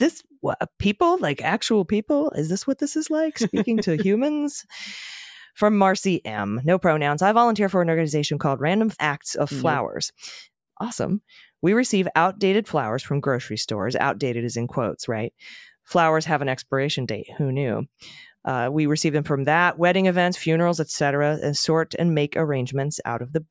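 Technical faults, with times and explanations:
No technical faults can be heard in this speech.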